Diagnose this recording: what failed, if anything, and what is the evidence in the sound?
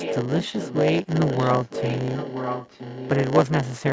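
A block size mismatch (padded) sits at the driver or buffer stage. One stage writes shorter blocks than the next reads, and the remainder of each block is filled with zeros. A brief silent gap lands in every block, 100 times a second, so a steady 100 Hz buzz runs under the speech for the whole clip. The padding stretches the timeline, and the speech plays at 0.919 times normal speed, about 8% slow, at roughly its usual pitch.

An echo leak sits in the call processing. The far end was likely on a loudspeaker with an echo canceller that failed to remove what its microphone picked up, and that residue came back down the line. A delayed copy of the speech trails it by 969 ms. From 0 to 0.26 s the copy is only a few dB below the speech. From 0.42 to 0.79 s and from 1.07 to 3.1 s it sits roughly 10 dB down.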